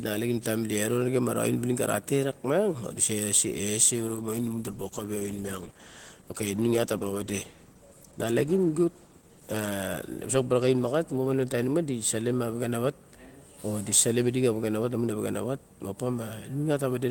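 Around 4.09 s the speech turns rough and a bit muffled, which is a call bitrate drop. The encoder seems squeezed from roughly 32 kbps down to something near 13 kbps, bottoming out for about 5.9 s, so the top end gets trimmed before it clears up at 12.01 s.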